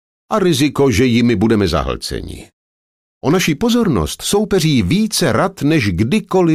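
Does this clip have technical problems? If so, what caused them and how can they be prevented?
No, nothing technical stands out here, so there's no cause to track down and nothing that needs preventing.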